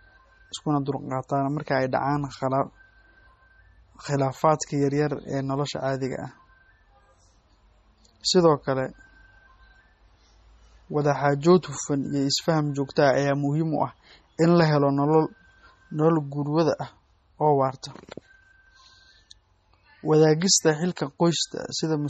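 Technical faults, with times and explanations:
Throughout, MP3 compression: the speech sounds watery and swirly, with nothing above 12.9 kHz and sibilants turning metallic. Heavy damage like this fits a bitrate near 32 kbps, where the encoder likely runs short of bits, cuts the treble and zeroes weak frequency lines that flicker between frames.
20.96 s, pre-echo: a hiss of about 13 ms comes just before a sharp attack, which sounds softened. The codec spreads its quantisation noise over the whole block, so noise sized for the loud onset also fills the quiet gap before it.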